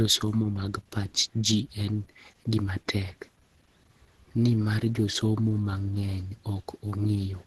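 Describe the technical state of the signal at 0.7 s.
At 0.7 s, like the whole clip, the speech has a muffled, hoarse, grainy quality, with nothing above 12.3 kHz. That's likely heavy Opus compression in its hybrid speech mode, which fits a low rate around 12 kbps, trimming bandwidth and roughening detail.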